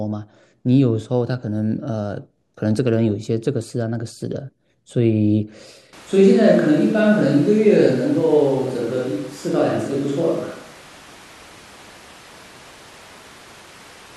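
Switch to a distant microphone at 5.93 s, lasting to the end of the speech clip. At that instant the sound turns roomy and hollow and loses bass, with no gradual transition. Overall loudness stays about the same, but room noise now sits roughly 25 dB below the speech. This is likely because the close microphone's feed dropped out or was left out of the mix, leaving a pickup farther from the talker that captures more of the room's reflections and ambience.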